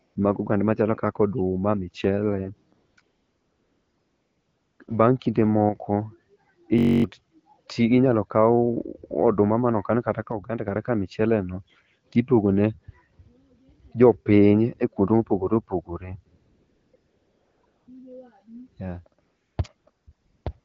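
Speech carried over an AMR wideband (HD Voice) link, which sounds clear and consistent with a mid rate such as 12.65 kbit/s, shows three kinds of fault. AMR comfort noise appears twelve times. The events cluster between 0.07 and 4.87 s and again between 16.37 and 20.64 s. They range from 20 ms to 1.78 s, the longest running 3.01 to 4.79 s. In each one the real background is swapped for smooth, steady synthetic hiss that gates in and out, which sets it apart from ordinary noise-gating silence. At 5.69 to 5.76 s and 10.32 to 10.68 s the level abruptly sinks by about 6 dB with no change in tone, then returns. That pattern points most likely to one channel dropping out before a mono sum. It differs from a gain dip because any material confined to one side vanishes entirely. From 6.78 to 7.04 s a system hang loop repeats one 21.33 ms fragment exactly twelve times, giving a rigid buzz at 46.9 Hz. 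That loop length fits a 1024-sample buffer. Roughly a third of a second of real audio is lost, and the identical cycles distinguish it from random packet-loss stutter.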